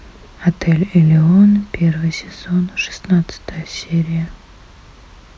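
No faults heard anywhere in the speech.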